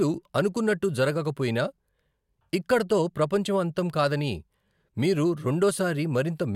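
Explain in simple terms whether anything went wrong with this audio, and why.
Nothing went wrong here: the recording of speech comes through without any hiccups or glitches to point to.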